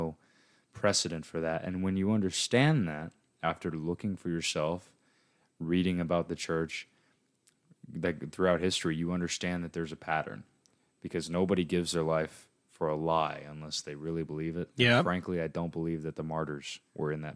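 No technical faults can be heard anywhere in the speech. There is no moment in the recording that calls for a timestamp or a note.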